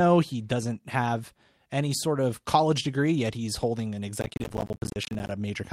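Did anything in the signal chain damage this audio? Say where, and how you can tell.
Yes. At the network and codec stage, a lost packet rebuilt from error correction leaves a rougher, noisier patch from 3.61 to 3.63 s, consistent with one frame decoded from a low-bitrate copy.

At the driver and buffer stage, processor overload crackle runs from 4.17 to 5.31 s. Dozens of missed deadlines, fitting roughly 10 ms buffers, each leave a short silent gap, heard together as gritty crackle.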